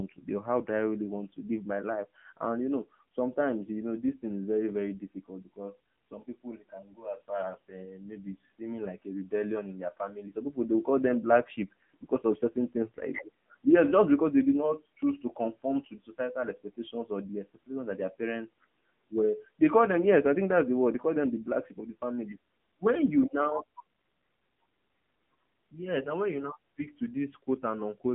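From start to finish the speech has passed through the AMR narrowband mobile codec at about 7.95 kbps. Nothing gets past 3.5 kHz, so it sounds boxed-in, and the low bitrate leaves it buzzy and clearly synthetic.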